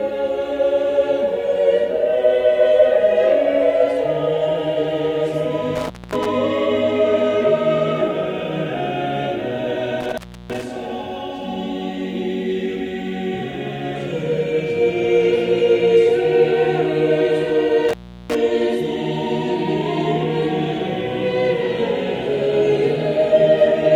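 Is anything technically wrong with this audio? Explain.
Yes. Intermittent contact at 5.75–6.26 s, 10.01–10.63 s and 17.89–18.35 s: a loose plug or cable briefly opens, dropping the sound for about 240, 320 and 360 ms, with crackle at each edge and faint hiss in the gaps.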